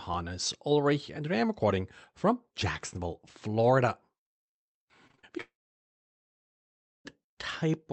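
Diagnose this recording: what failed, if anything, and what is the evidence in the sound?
Network stage. Between 5.07 and 5.25 s the speech turns choppy. There are four short holes, the longest about 35 ms, and each is patched by stretching the sound just before it, so roughly half that stretch is concealment. This is repeated packet loss (robotic sound). Unlike a single dropout, the audio recovers briefly between holes.

Network stage again. From 5.41 to 7.07 s the audio breaks off: a brief decaying fill, then about 1.5 s of silence, and speech resumes with that section missing. This long network dropout is likely a stalled connection. Unlike a muted input, it begins with concealment fill rather than a clean cut.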